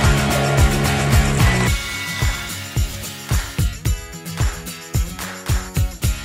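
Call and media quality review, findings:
Lost LE Audio frames, 2.91–2.93 s: brief noisy smear rather than a silent gap, fitting two 10 ms LC3 frames concealed by the decoder's sign-randomised spectrum repeat.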